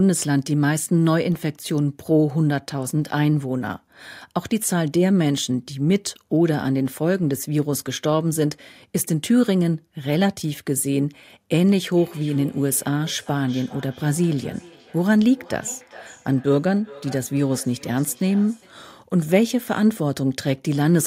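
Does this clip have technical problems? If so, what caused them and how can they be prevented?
Yes. From 11.97 to 18.83 s there is feedback echo between two devices: one device in the room plays another's microphone feed, which that microphone picks up again, beyond its echo canceller's reach. The speech comes back roughly every 400 ms, peaking about 22 dB below the direct sound. Muting all but one device in a shared room, or using headphones, prevents it.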